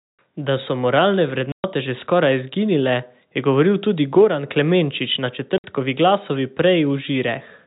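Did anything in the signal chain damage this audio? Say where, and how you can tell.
Yes, at the network: packet loss filled with silence leaves hard-edged dropouts at 1.52 s (120 ms) and 5.58 s (60 ms), multiples that fit 20 ms packets. Gaps are true silence, not smeared concealment.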